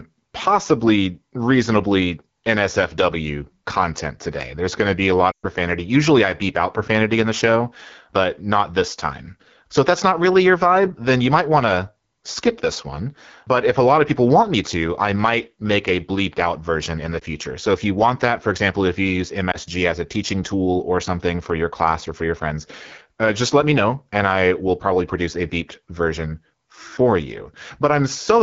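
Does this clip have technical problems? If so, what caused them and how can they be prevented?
Yes. The whole clip has the rough, raspy edge of the AMR wideband (HD Voice) codec, which fits one of its lowest modes, around 8.85 kbit/s. At that rate the vocal tract model and its pulse excitation can't follow the speech closely, and the top band up to 7 kHz is just shaped noise, so the voice sounds grainy. Keeping the link at 12.65 kbit/s or higher would prevent this.

There are also lost AMR speech frames. From 5.32 to 5.46 s there's a run of about 0.12 s of lost audio, roughly six frames' worth. The decoder stretches the last good pitch and vocal tract settings, fades them out, and the voice comes back weak. There are two shorter dips, one at 17.20–17.23 s and one at 19.51–19.57 s, each about a single 20 ms frame, which sound like quick warbles. Better radio coverage or stronger error protection on the channel would prevent these.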